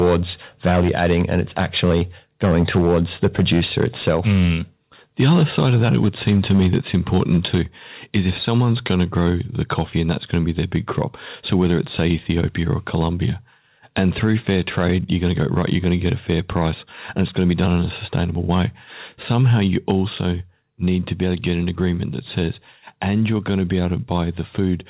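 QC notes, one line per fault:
0.0–4.52, 5.2–7.61, 8.15–12.38, 12.94–13.04, 13.99–16.66, 17.19–18.65, 19.3–19.91 s: microphone overload. The loudest syllables crackle harshly. The likely cause is input gain set too high, so peaks drive past the converter's ceiling and their tops are sliced off. The overshoot is worst early: about 7 dB in the first run, about 4 dB in the second, and about 1 dB after that. A few percent of samples are flattened in the first two runs, under one percent in the middle runs, and a couple of percent again at 19.3 s. On the waveform, peaks show as flat-topped plateaus. On the spectrogram, broadband smearing appears on those syllables, filling the band up to its edge at 4 kHz.
0.8, 4.09, 7.55, 19.91 s: microphone volume stepped down. Voice and background drop together in a single sudden step, each one during or right at the end of a distorted stretch. This is likely automatic gain control in the call software reacting to the clipping and pulling the device's input volume down. 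The cuts are about 2 dB at the first three points and about 3 dB at 19.91 s. On the waveform, the envelope steps down abruptly with no ramp. On the spectrogram, the level across the whole band dims at once, noise floor included.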